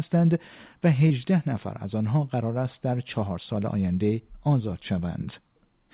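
At 1.08 to 1.12 s, short concealed packet loss: a few hundredths of a second of speech arrived too late, and the receiver stretched the preceding sound to cover the hole before blending back. Unlike a plain dropout, there is no silent gap, just a brief smear. The whole call stays band-limited below 4 kHz, which points to a G.711 A-law path at 64 kbps.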